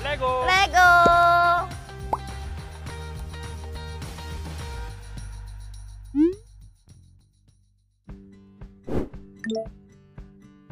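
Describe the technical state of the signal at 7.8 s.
Nothing goes wrong with the signal at 7.8 s; the audio is intact at that point.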